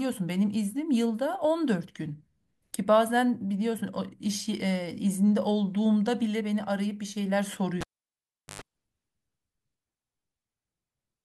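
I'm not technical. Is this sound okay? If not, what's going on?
No, there's a cable pulled and plugged in at about 7.81 s. A pop, then about three quarters of a second of near silence, then a short 50 Hz mains buzz while the plug's tip touched first, and another pop as the speech returns at 8.62 s.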